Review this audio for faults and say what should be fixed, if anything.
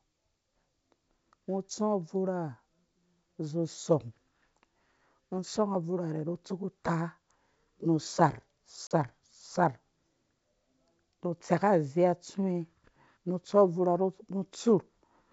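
Packet loss on an ADPCM call at 8.87 to 8.92 s: about 40 ms of the G.722 stream, a few packets, becomes hard-edged silence. The decoder's predictor and step size then lag the sender's, so the sound resumes briefly mistracked. On the waveform this is a flat gap with square edges, and the spectrogram shows a blank vertical stripe across all bands. Adding packet loss concealment and resetting or resynchronising the ADPCM state after a gap would prevent it.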